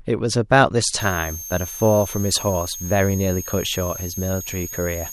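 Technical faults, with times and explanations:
1.00–5.13 s, switching supply whistle: a high tone drifting between 6.3 and 6.6 kHz, roughly 10 dB below the speech, from a power supply switching in an audible burst mode or beating with another supply.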